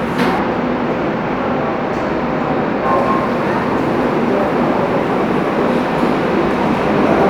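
From 0.39 s to 2.86 s the audio shows channel delay (comb filtering): one channel lags the other by a tiny amount, around 0.05 ms, which points to a shift of roughly two samples, and the mono sum cancels what is common to both at evenly spaced frequencies. With so short a lag the first notch sits near 10 kHz, so the sound turns dull up top. A spectrogram shows a dark band around 10 kHz for that stretch.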